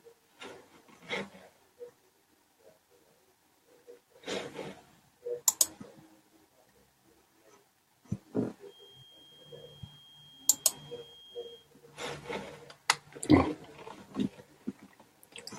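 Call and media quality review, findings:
Feedback whistle, 8.62–11.69 s. Thin steady tone at 3.2 kHz behind the speech, roughly 20 dB under it, swelling and fading slowly in level. Likely cause: loudspeaker-to-mic acoustic loop with gain sitting at the feedback threshold, one frequency sustaining without runaway.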